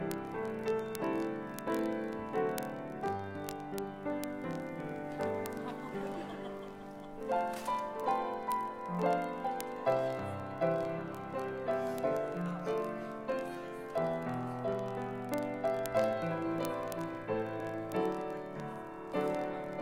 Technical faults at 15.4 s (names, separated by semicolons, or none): word clock ticks